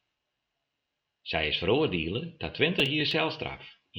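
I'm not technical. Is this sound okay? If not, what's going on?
No. From 2.80 to 3.13 s there's processor overload crackle. The computer fell behind and skipped several tiny slices of speech, causing brief gritty crackling.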